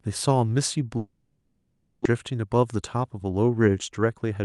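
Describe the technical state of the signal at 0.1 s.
At 0.1 s the speech signal is intact, with no dropout, distortion or other fault, only the ordinary coding character and upper-band limit of the call path it travelled through.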